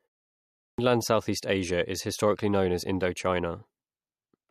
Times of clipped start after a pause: 0.61-0.78

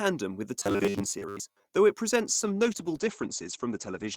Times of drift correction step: none

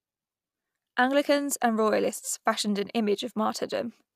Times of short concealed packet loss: none

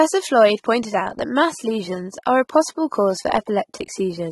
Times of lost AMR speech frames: none

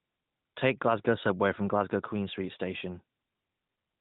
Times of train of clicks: none

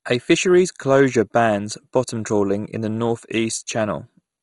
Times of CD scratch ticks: none

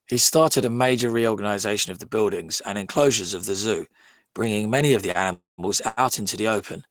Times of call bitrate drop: none

